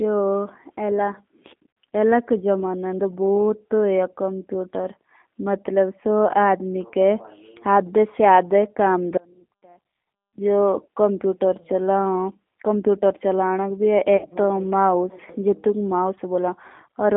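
The whole clip of speech carries G.729 codec damage, and it is plainly audible. The voice sits in a narrow band, roughly 250 Hz to 3.5 kHz, which fits an 8 kbit/s G.729A telephone link. The codec rebuilds each short frame from a vocal tract model, a pitch estimate and a few pulses. That leaves the speech thin, slightly rough and synthetic. Nothing above 3.5 kHz gets through.

At 1.71 to 1.77 s comes the first VoIP packet loss concealed by the speech codec. About 60 ms of audio is missing, which fits two lost packets. The decoder fills the gap by repeating its last pitch and filter at falling gain. The result is a brief buzzy tone or coloured noise that fades. The voice stays weak for a moment after packets return, because each frame is built on the last.

From 9.17 to 10.38 s there is an audio dropout to a faint residue, lasting about 1.2 s. The speech cuts out abruptly, mid-flow. Only a faint sound remains, about 30 dB below the normal level. 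Then the speech returns just as suddenly. The likely cause is that the wanted signal was lost while the path after the break stayed live.

At 14.17 to 14.27 s the same concealed packet loss returns. Again about 60 ms is gone, consistent with two packets. It is heard as a short, fading tone or noise, and the voice takes a moment to recover.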